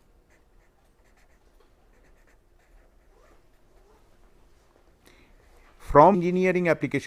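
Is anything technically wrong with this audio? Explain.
Yes, there is damaged data in a compressed stream at two points: 2.42 s, and from 6.13 to 6.15 s. At each spot, some bytes of the encoded file were corrupted, so the decoder misread those frames, lost its place in the bitstream, and had to hunt for the next valid frame header before resuming. The result is a very short, unnatural chirp or blip, a few milliseconds at the first point and about 20 ms at the second.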